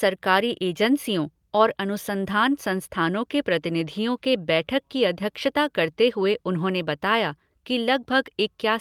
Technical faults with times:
none

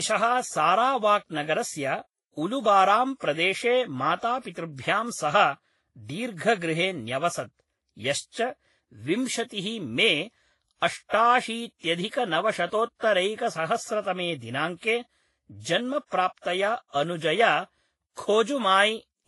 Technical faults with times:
0.00-19.28 transcoding between lossy codecs

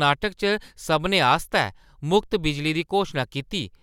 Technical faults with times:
none

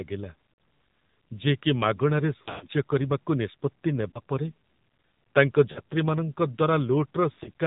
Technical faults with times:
0.00-7.67 AMR narrowband mobile codec
0.54-0.58 lost AMR speech frames
2.38-2.67 lost AMR speech frames
4.10-4.19 lost AMR speech frames
5.72-5.80 lost AMR speech frames
7.32-7.49 lost AMR speech frames

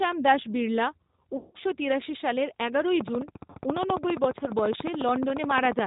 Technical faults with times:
0.00-5.87 G.729 codec
1.37-1.59 VoIP packet loss concealed by the speech codec
3.01-5.80 train of clicks
3.50-3.55 VoIP packet loss concealed by the speech codec

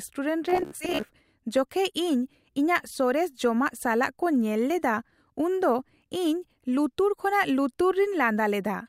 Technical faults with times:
0.50-1.08 Bluetooth stutter

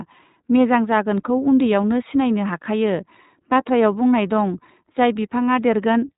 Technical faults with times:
0.00-6.17 iLBC codec

